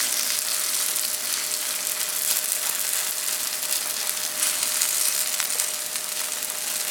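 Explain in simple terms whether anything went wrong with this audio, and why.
Two short patches of DAB burbling, at 3.27 to 3.46 s and 6.43 to 6.70 s. Weak digital radio reception let errors slip past the correction, so short blips of noise appeared in individual frequency bands.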